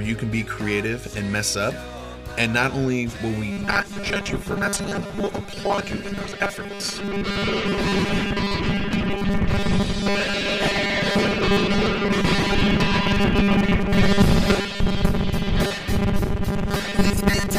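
Robotic sound from repeated short buffers runs from 3.52 s to 17.59 s: a rigid, metallic buzz at 200 Hz over most of the sound. The likely cause is playback looping a roughly 5 ms stretch while fresh audio arrives too late, skipping the real material.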